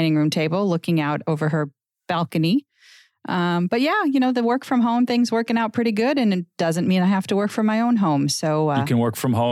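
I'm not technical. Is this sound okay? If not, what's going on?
Yes, this recording sounds fine. Nothing in it points to a technical problem.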